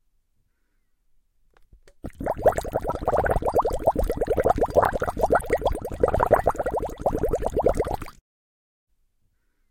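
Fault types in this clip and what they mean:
Damaged data in a compressed stream: Part of the encoded stream no longer holds valid data. The decoder cannot read the affected frames correctly. It loses its place and hunts for the next good frame header before playback resumes. Here this happens twice. The first break runs from 2.86 to 2.92 s, about 60 ms. The second runs from 5.37 to 5.44 s, about 70 ms. Each is a brief disruption in the sound, such as a chirp, squawk, click or short gap.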